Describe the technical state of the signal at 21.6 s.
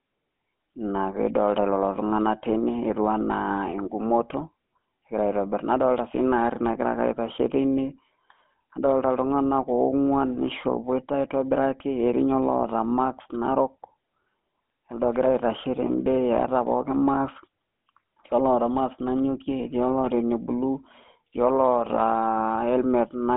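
Buzzy, gravelly and band-limited speech, with nothing above about 3.8 kHz, continuing throughout the clip: GSM full-rate codec, whose pulse-driven vocal-tract model fits a 13 kbps stream.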